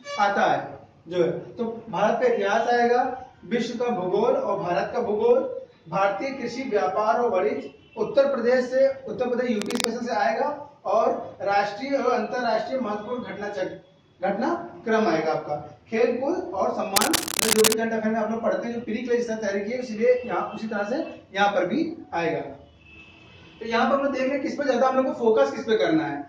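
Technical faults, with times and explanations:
9.59 to 9.86 s and 16.96 to 17.74 s, cable scratch noise: two patches of dense, ragged crackle sit over the audio, the first brief and a little quieter than the main sound, the second nearly 0.8 s long and about as loud as the sound itself. The likely cause is a worn lead or connector being moved, so its contact resistance jumps about rapidly and lets irregular bursts of noise into the signal, heard as scratching and rustling.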